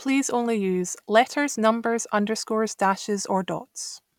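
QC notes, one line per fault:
No faults turned up anywhere in this speech recording, so there's nothing to flag.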